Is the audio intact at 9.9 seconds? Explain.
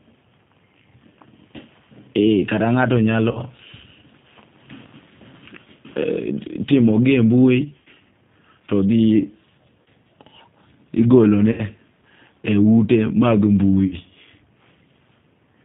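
No. Just before 9.9 s, from 9.82 to 9.88 s, the sound turns into a brief stretched, smeared sound that fades. This is VoIP packet loss concealed by the speech codec. About 40 ms of audio went missing, which fits two lost 20 ms packets. The decoder filled the gap by repeating its last pitch and filter with falling gain. Because each frame builds on the one before, 9.9 s itself still falls in the weak, distorted recovery.

Across the whole clip, including this moment, the speech has a narrow, slightly rough and synthetic quality with nothing above 4 kHz. That points to the G.729 codec at 8 kbit/s, which rebuilds speech from a vocal tract model and a few pulses per frame, and its damage is plainly audible.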